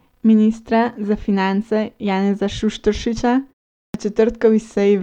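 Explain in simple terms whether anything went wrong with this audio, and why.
Clipped start after a pause at 3.88 s: after 0.43 s of silence the output device dozed off, swallowing the first 62 ms while it woke.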